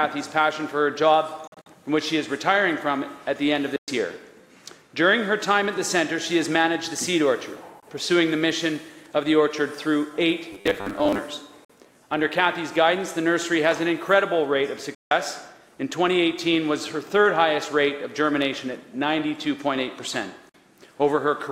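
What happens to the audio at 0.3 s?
Nothing goes wrong at 0.3 s; the audio plays through that moment intact, with no dropout, click or distortion.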